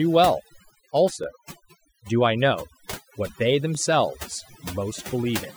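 Speech, with two faults. Overdone noise removal runs throughout: a noise suppressor set far too strong pulls frequency bands near its noise estimate down or off, leaving a lowered background with twinkling specks. Overlapping chunks occur at 1.24 s and 3.75 s: the audio was handled in 2.5-second blocks that each start before the previous one ends, so 13 ms replays at each join, heard as a brief click or stutter.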